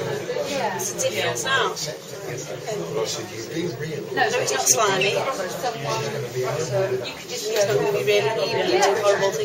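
No dropouts, clicks, distortion or level jumps are audible at any point in the audio.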